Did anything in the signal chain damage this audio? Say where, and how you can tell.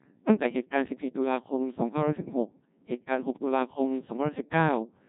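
Yes. The damage happens at the codec stage and lasts the whole clip. This is the Codec 2 vocoder. The speech is robotic and buzzy from start to finish, and the damage is heavy. Nothing is left above 3.8 kHz. The decoder does not keep the waveform. It rebuilds the speech from sine waves, using only pitch, voicing, energy and a coarse spectral shape. The sound points to a rate of about 1.6 kbit/s.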